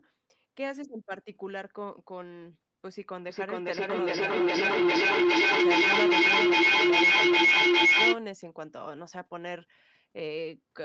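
From 3.29 s to 8.22 s the speech is caught in a feedback echo between two devices. Each word returns at a steady interval of about 0.4 s. A second device in the room plays the call back, and this microphone hears it again. The echo canceller cannot remove sound it did not play itself. Here the repeats build up rather than fade, peaking at about 14 dB above the speech. They sound thin and ringing, and stop above 8 kHz like the rest of the call audio.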